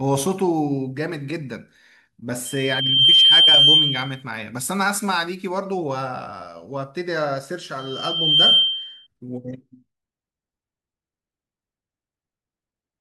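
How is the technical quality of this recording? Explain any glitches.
Loudspeaker feedback squeal, from 2.45 to 4.23 s and again from 7.78 to 9.07 s, is what mars this speech recording. The microphone is picking up a loudspeaker it feeds, and at 3.1 kHz the loop gain exceeds one, so that frequency reinforces itself. Each time a thin, piercing tone swells up in under a second and sits well above the speech, roughly 15 dB over it the first time and about 10 dB the second.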